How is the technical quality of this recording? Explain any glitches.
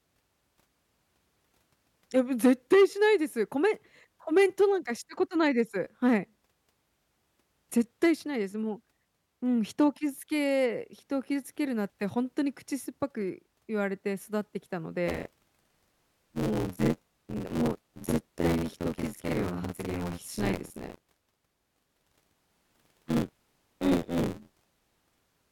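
The recording has one clear playback fault, and it lasts through the final ten seconds or so. From 15.07 s to the end, at 25.52 s, the speech takes on buffer tearing. The writing program and the playback hardware have drifted, so their positions cross inside each buffer. Somewhat under half of every buffer repeats audio from about 50 ms earlier, with hard joins at both edges. The result is a robotic buzz near 86.1 Hz, which fits a 512-sample buffer. It sounds only while speech is present.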